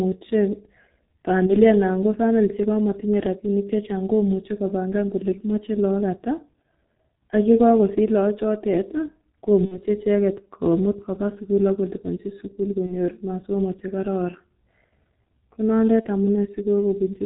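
From the start, the speech carries G.723.1 codec damage: nothing above 4 kHz, a muffled, hoarse timbre and smeared consonants, as the slow-updating voice model with 30 ms frames struggles. The heavy coarseness fits the 6.3 kbit/s mode.

VoIP packet loss concealed by the speech codec occurs at 1.46–1.54 s, 9.65–9.79 s, 12.86–12.94 s and 16.01–16.09 s. Each gap, one 30 ms frame, or two at 9.65 s, is filled by extrapolating the last pitch and filter, giving a fading buzzy tone or coloured noise, followed by weak speech briefly.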